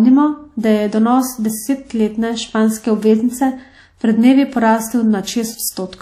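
A transform codec, likely WMA compression, has coded the speech coarsely throughout, with its long blocks spreading quantisation noise over tens of milliseconds and weak components zeroed. Nothing remains above about 15.5 kHz, and a ringing, washy hiss rises and falls with the voice, damage that fits a bitrate around 48 kbps.

From 0.60 to 0.63 s, a sharp attack landing late in a coding block has had its noise spread back across the quiet moment before it. The result is pre-echo: a brief hiss, about 39 ms long, leads into the onset, which sounds softened and smeared.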